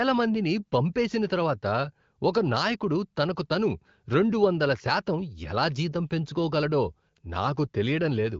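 No technical faults can be heard in this speech.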